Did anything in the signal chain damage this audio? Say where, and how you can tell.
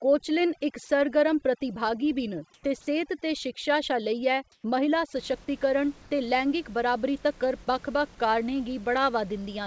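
Yes. Overdone noise removal from 0.0 to 5.16 s, ending before "सशक्तीकरण ते लैंगिक बराबरी": heavy call-processing suppression gates quiet bands, leaving a twinkling, broken-up background.

Comfort noise in place of the background at 2.54, 4.52 and 6.02 s (90 to 120 ms each, the last before "ते लैंगिक बराबरी तक्कर"): the real background gives way to flat, featureless hiss, about 4 dB different in level at the first. This is likely discontinuous transmission filling pauses with synthetic noise.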